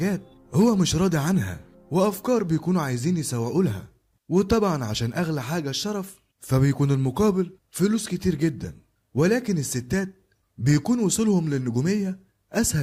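No technical faults can be heard anywhere in the audio, which holds steady throughout.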